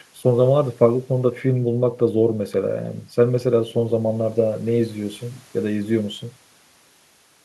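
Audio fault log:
No fault can be heard anywhere in the clip. Nothing in the audio calls for a timed entry.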